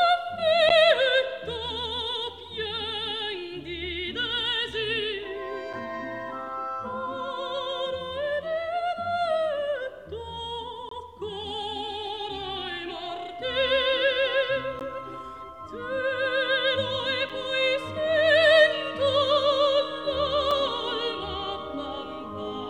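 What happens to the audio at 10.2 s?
Nothing goes wrong at 10.2 s; the audio plays through that moment intact, with no dropout, click or other disturbance.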